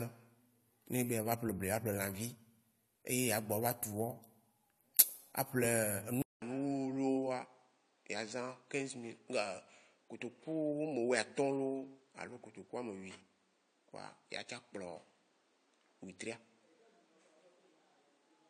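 Speech recording: at 6.22 s a 200 ms gap, then audio cut off above 9 kHz, slightly quieter with new background noise about 40 dB below the speech, likely an input switched to a poorer device.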